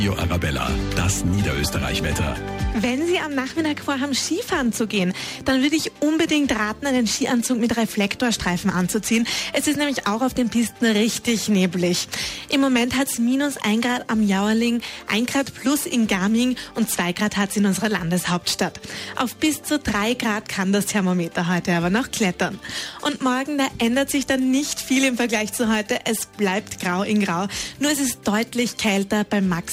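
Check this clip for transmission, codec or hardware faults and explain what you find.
No transmission, codec or hardware faults can be heard anywhere in the clip. The audio runs without any break or disturbance that would point to a problem in the chain.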